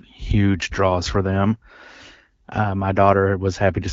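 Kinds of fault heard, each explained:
No faults can be heard in this speech recording. The speech carries the slightly band-limited character of AMR wideband (HD Voice) coding at 12.65 kbit/s, with only light coding damage and detail reaching up to about 7 kHz.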